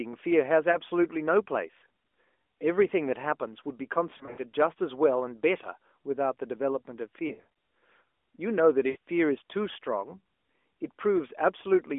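Lost AMR speech frames occur at 0.72 to 0.77, 4.18 to 4.41, 7.28 to 7.48 and 8.90 to 8.97 s. The decoder repeats its last good settings with falling gain. The first is a brief dip. The middle two stutter and fade. The last smears briefly.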